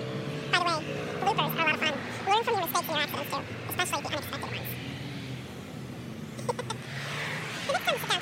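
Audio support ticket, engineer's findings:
Whole clip at double speed, pitched up an octave. Audio read two samples at a time: reader's treating the stream as stereo or wider samples, so highs fold back.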